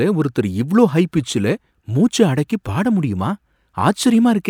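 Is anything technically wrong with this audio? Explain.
No, nothing in this speech recording stood out as technically wrong on listening.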